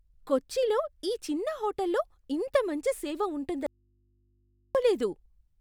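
At 3.66 s the speech cuts out abruptly in an audio dropout to a faint residue, returning just as suddenly at 4.75 s after about 1.08 s. The gap holds only a low mains hum, roughly 40 dB below the speech, likely from a signal path that lost its source but stayed live. On a waveform the envelope collapses to a thin band; a spectrogram shows the speech energy vanishing, leaving steady low-frequency hum lines.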